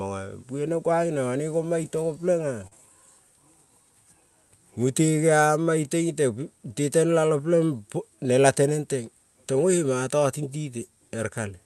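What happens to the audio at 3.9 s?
Nothing goes wrong at 3.9 s: the speech passes through the call path there intact, with no dropout, glitch or other fault at that moment.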